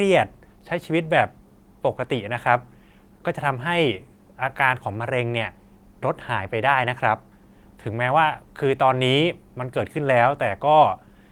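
No faults in this speech clip; the Opus voice coding is audible only as a light softening of detail, consistent with hybrid mode at around 24 kbps.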